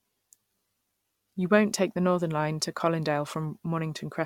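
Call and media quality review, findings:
Generation loss, whole clip. Speech likely re-encoded through AAC-LC about three times, each pass requantising on a shifted frame grid so errors stack. Swirly, hollow texture, smeared consonant attacks, nothing above 17.6 kHz, fitting a 96 kbit/s chain.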